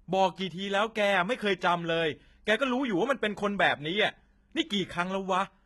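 HE-AAC compression damage runs through the whole speech clip: the treble stays bright but sounds synthetic, with s sounds turning gritty and lispy. The likely cause is spectral band replication rebuilding the upper band from copied lower harmonics, which fits a very low bitrate of around 16 kbps.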